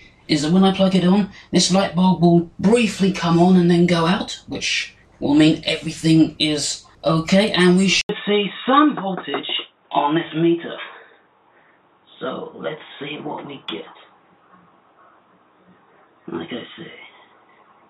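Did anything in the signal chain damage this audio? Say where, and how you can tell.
Yes. At 8.01 s the sound drops out for 80 ms, then returns a few decibels quieter and boxy, with nothing above 3.8 kHz and a faint new noise floor. At the input stage, the input likely switched to a poorer, narrower-band device.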